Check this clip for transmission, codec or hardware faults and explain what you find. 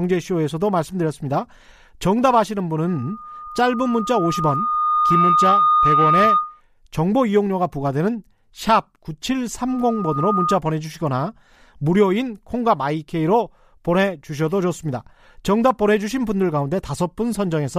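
The speech has one hardware fault, occurring twice. Loudspeaker feedback squeal at 2.86 to 6.61 s and 9.68 to 10.59 s. A microphone picks up its own loudspeaker, so a 1.2 kHz tone grows until the loop breaks. It swells over about two seconds to roughly 5 dB above the speech, then returns in under a second at about speech level.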